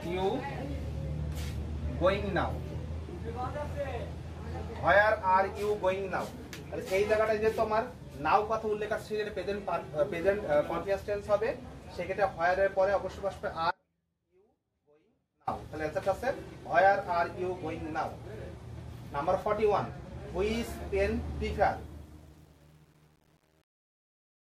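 At 13.71 s the audio drops out abruptly and stays gone for 1.76 s, returning at 15.47 s. The gap is not true silence. A faint residue of the sound remains, roughly 35 dB below its normal level, and the change is a hard cut rather than a pause or fade. This is an audio dropout to a faint residue, likely caused by the wanted feed being lost while the downstream path stayed live and picked up leakage. The second fault sits in the closing fade-out, which runs from about 21.7 s to 24.5 s. From 21.65 s the fade shows truncation distortion. As the level falls, the waveform is rendered in too few amplitude steps without dither, which fits roughly 9-bit resolution. From 21.97 s to the end, the tail turns gritty instead of thinning away cleanly.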